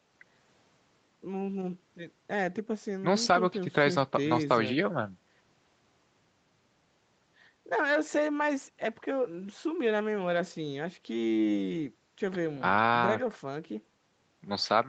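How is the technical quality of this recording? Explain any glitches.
No glitches can be heard in the speech, which arrives with the band limit typical of a call: nothing above 8 kHz from the Opus codec and microphone processing, and the lowest bass trimmed by the call's high-pass filter.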